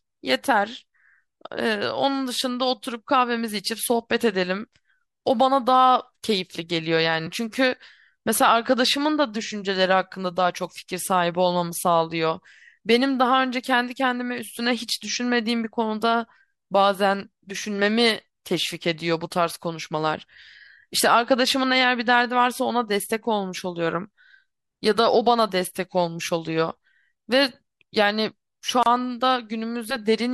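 At 28.83 s the speech breaks for 31 ms. It is a gap at a join of encoded pieces. Untrimmed encoder padding sits between separately encoded segments.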